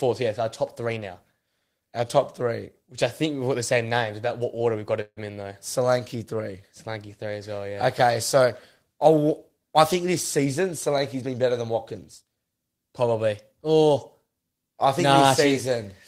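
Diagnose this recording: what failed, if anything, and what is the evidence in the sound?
A call audio freeze, likely delayed network packets draining the jitter buffer, inserts a fading buzz and 50 ms of silence at 5.01–5.19 s, losing nothing.

Jitter buffer speed-up: the receiver cut pitch periods to shed excess delay, so speech at 10.07–12.37 s runs at 107% speed, same pitch, hurried.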